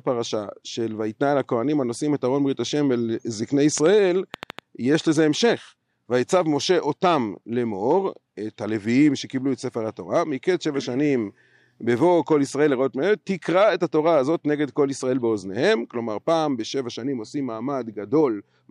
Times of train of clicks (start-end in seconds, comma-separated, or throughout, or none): 3.78-4.60